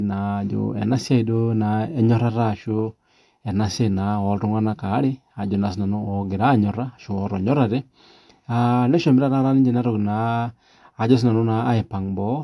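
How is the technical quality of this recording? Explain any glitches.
Nothing stood out as a glitch or technical problem on listening to this recording.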